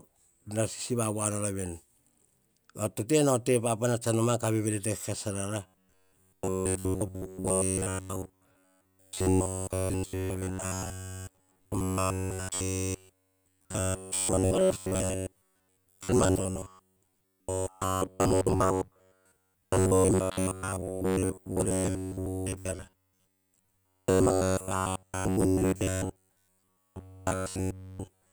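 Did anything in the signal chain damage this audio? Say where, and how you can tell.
Yes. Robotic sound from repeated short buffers runs from 5.67 s to the end at 28.32 s, turning the speech into a rigid metallic buzz fixed near 93.8 Hz. The likely cause is a starved driver buffer replaying about 10.7 ms chunks while most real audio is skipped.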